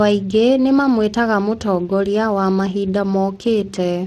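From start to finish the speech carries Speex codec damage, and it's plainly audible. The CELP coder is short of bits for the excitation, which fits a bitrate somewhere around 22 kbps, so the voice comes out noisy and hoarse, with nothing at all above 15.2 kHz.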